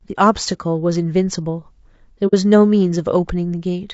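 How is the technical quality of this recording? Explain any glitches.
The technical quality is compromised: the speech has a plainly audible coded roughness throughout, and there's one brief dropout.

Throughout the clip, the speech sounds rough and grainy, with noise filling between the harmonics and a thin, synthetic top end. That's likely low-delay AAC compression (AAC-ELD). Its short frames resolve pitch poorly, and the damage suggests a low bitrate around 32 kbps.

From about 2.27 to 2.33 s there's AAC frame loss with muting, a soft-edged hole of roughly 60 ms, consistent with two lost frames. The decoder zeroed those frames, and the overlapping windows fade the sound out and back in.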